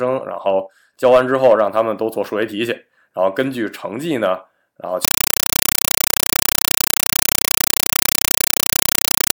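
At 5.05 s the speech drops out and, right through to the end, you get a compressed stream played as audio: an AC-3 bitstream that was passed along as if it were ordinary samples instead of being decoded. What you hear is harsh, very loud chattering static, a 5.33 ms noise burst followed by silent padding, repeating 31.25 times a second. The density of the bursts points to a 256 kbps stream.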